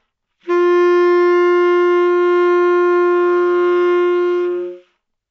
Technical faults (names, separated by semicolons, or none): none